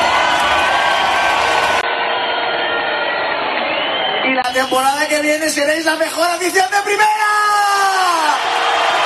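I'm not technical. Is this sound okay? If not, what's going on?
No. From 1.81 to 4.44 s the sound turns dull and boxy, slightly quieter, with a tiny gap where it changes. Nothing above about 4.4 kHz gets through. That's likely an input switched to a poorer device, such as a headset microphone.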